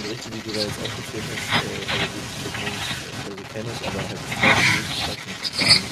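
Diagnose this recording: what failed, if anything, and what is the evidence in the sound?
Call processing is where this one went wrong: the other side's voice is leaking through for the whole clip, 0 to 5.9 s, sitting roughly 10 dB above the main talker. Likely the echo canceller missed loudspeaker playback picked up by the microphone.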